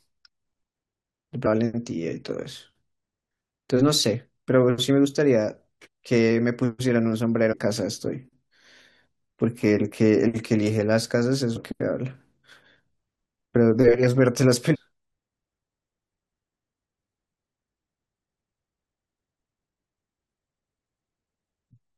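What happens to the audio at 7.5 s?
A stretch of the compressed speech stream is corrupted at 7.51 to 7.54 s: bytes there were lost or overwritten, so the decoder can't read those frames correctly, drops sync and has to hunt forward for the next valid frame header before decoding resumes. This damaged data in the compressed stream is heard as a brief chirp or blip lasting about 24 ms.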